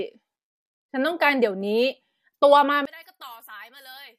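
From 2.85 s to the end, the speech drops by about 26 dB to a faint residue. The likely cause is one channel inverted: with one stereo channel's polarity reversed, content common to both sides cancels when summed to mono, leaving only the small inter-channel difference.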